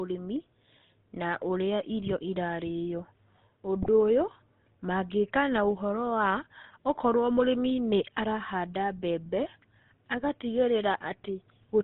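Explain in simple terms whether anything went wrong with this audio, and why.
Throughout the recording, the GSM full-rate codec gives the speech a buzzy, gravelly roughness and a muffled top end, because this early phone codec discards everything above 4 kHz. From 3.82 to 3.89 s, GSM bit errors corrupt a few frames of the decoder's data, so the speech briefly breaks into a squawking, gargling burst.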